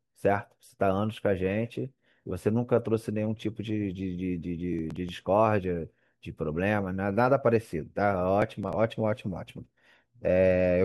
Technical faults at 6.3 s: none

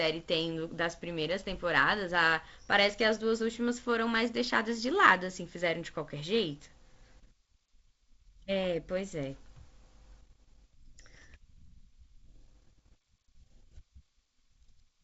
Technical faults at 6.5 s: none

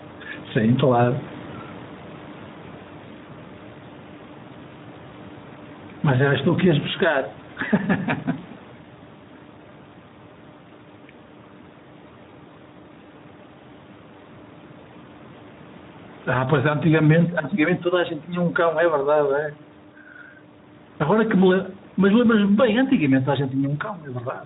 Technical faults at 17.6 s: gain pumping; Speex codec

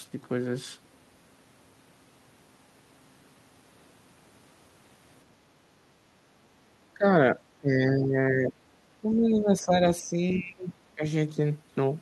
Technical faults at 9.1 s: speech suppressed in double talk

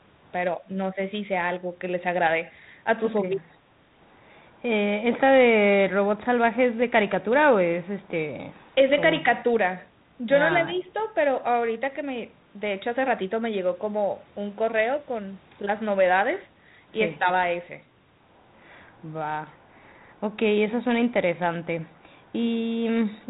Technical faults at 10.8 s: speech suppressed in double talk

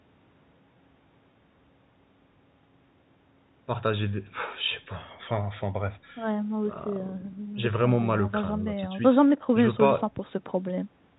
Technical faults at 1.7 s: none

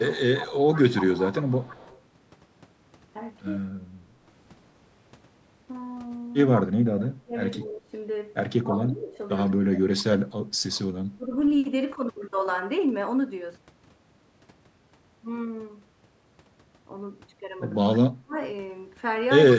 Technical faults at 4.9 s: none

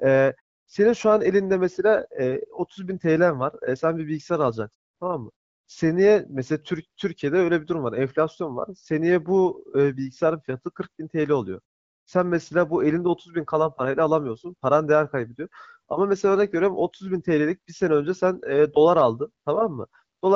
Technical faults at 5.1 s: none

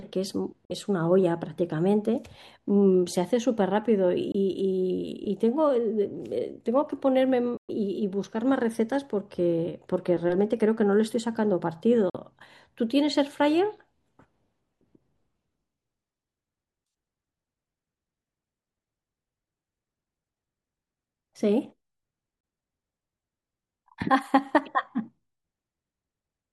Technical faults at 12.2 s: Bluetooth dropout

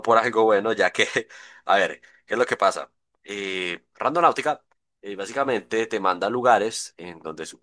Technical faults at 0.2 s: none

